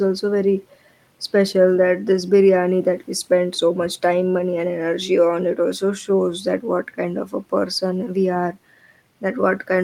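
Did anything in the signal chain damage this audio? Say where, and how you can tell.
No, nothing in this speech recording shows damage from any stage of the signal chain. There is no audible event to place at any point in the recording.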